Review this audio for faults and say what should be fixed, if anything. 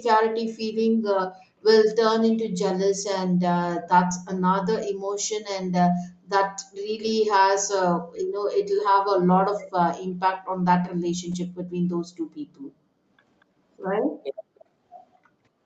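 There are four short bursts of echo leak, at 0.49–0.55, 9.58–9.71, 13.4–13.45 and 14.55–14.65 s. A faint copy of the speech trails about 232 ms behind, roughly 15 to 40 dB down, most audible at the first two. It's likely a speakerphone whose echo canceller didn't fully converge.

Background gated by the echo canceller shows up at 15.32–15.43 s. The room sound drops out, about 40 dB at its deepest, for roughly a tenth of a second, then returns when the suppressor releases.

To prevent both, the far end should use a headset, or a device with better-tuned echo cancellation and gentler residual suppression.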